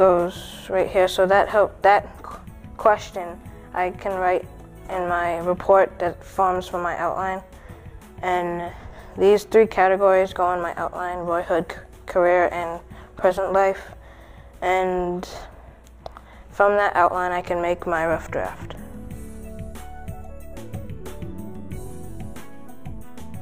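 No technical faults are audible.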